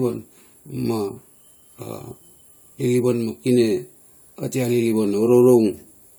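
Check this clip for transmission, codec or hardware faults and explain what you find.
Nothing in this speech recording points to a transmission, codec or hardware problem, so there's nothing here to flag.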